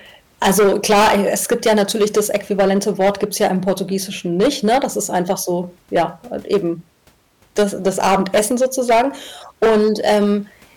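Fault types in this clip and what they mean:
Hard clipping: a harsh fuzz sits on every loud syllable of this speech throughout, because the signal drives about 15 dB past what one stage can pass, so peaks are sliced flat, roughly 7% of samples, adding high harmonics across the upper spectrum.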